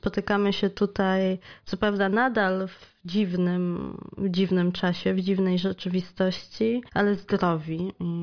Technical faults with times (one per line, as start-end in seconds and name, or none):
none